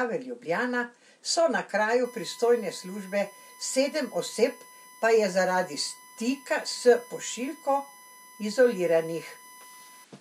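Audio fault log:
2.04 to 10.04 s, USB whine: a fixed-pitch 1 kHz tone sits roughly 25 dB below the speech. The USB bus draws current in 1 ms frames, and that 1 kHz ripple leaks into the audio path through shared power or ground, producing a constant whine.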